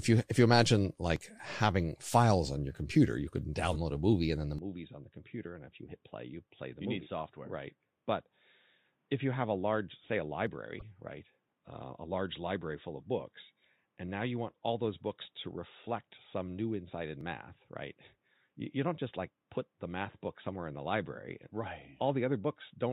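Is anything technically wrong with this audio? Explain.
Yes, there are three kinds of fault in this speech clip.

Dropped buffers (overruns) are the likely cause of the jumps at 1.16 s, between "you if you imagine" and "having files on your", and at 10.47 s and 17.21 s. Samples were overwritten before being collected, so a few milliseconds vanish (roughly 10 ms at 10.47 s) and the sound jumps ahead without any gap.

Corrupt frames were decoded at 3.73 to 3.76 s, between "your computer you could" and "a movie and then", and at 10.79 to 10.83 s, where about two frames are hit. The damaged data put energy at the wrong frequencies, producing brief chirpy blips.

At 4.59 s, right after "movie and then the", the input was likely switched to a poorer device with no silence at the switch. From there to the end, the band is narrower, the level drops by about 10 dB, and a new noise floor sits about 45 dB down, so the sound turns dull and boxy.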